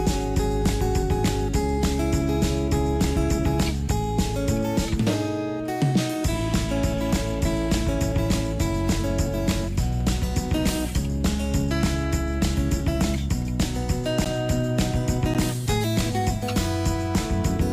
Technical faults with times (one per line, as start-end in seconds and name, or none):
14.25 block of digital silence
15.34 block of digital silence